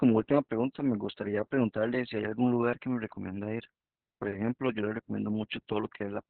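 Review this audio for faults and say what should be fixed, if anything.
Opus voice compression runs throughout. Nothing reaches above 4.3 kHz, so the speech sounds muffled, hoarse and faintly robotic. That fits a narrowband SILK stream near 6 kbps. Encode at a higher bitrate so Opus keeps wideband.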